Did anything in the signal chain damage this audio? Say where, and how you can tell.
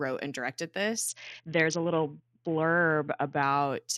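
Yes, at the codec stage: a Bluetooth SBC bit pool drop from 1.06 to 3.43 s. The speech goes dull and gritty there, which fits the bit pool falling from around 28 to about 6, near 60 kbps, so the top sub-bands go starved and the rest are coarsely quantised.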